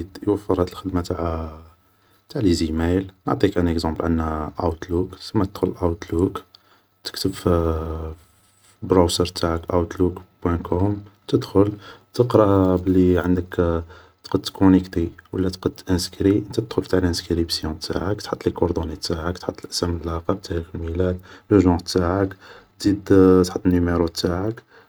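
At 3.96 s there is a block of digital silence, about 0.73 ms long, which fits a 32-sample block of zeros. The speech drops out abruptly and returns, giving a sharp tick.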